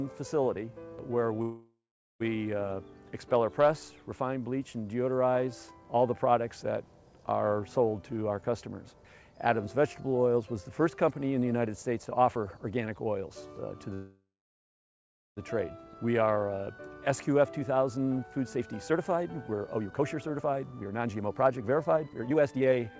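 From 1.42 to 2.22 s the sound trails off into a fading buzz and then about 0.46 s of near-silence before picking up exactly where it stopped. That's a call audio freeze, likely packets stalling until the jitter buffer ran dry. Nothing is lost; a 0.78 s gap is inserted. The same thing happens from 13.94 to 15.39 s, with a longer 1.13 s silent stretch inside a 1.43 s hold.

Jitter buffer speed-up follows the first freeze. From 8.42 to 8.88 s and from 10.37 to 12.67 s the audio runs about 7–8% fast at unchanged pitch. From 16.04 to 16.68 s it runs 11% fast. From 17.09 s to the end it runs a very hurried 30% fast, shedding roughly two seconds as the receiver trims pitch-period slices to catch up. All of it comes through a G.722 path with nothing above 8 kHz.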